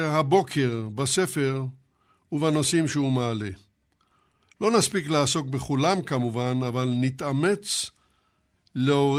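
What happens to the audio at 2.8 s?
Nothing goes wrong at 2.8 s; the speech there runs through cleanly, with no dropout, glitch or distortion.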